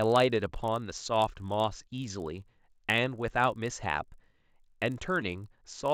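A speech recording carries a steady 50 Hz buzz throughout, present only while sound is present, caused by a resampler restarted on every block. Each 20 ms block was converted from 16 kHz to 48 kHz independently, leaving a small error at every block edge.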